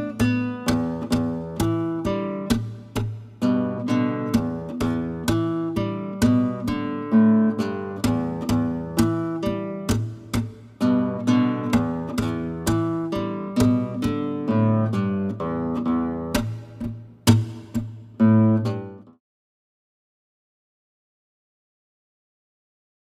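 No technical faults are audible anywhere in this recording.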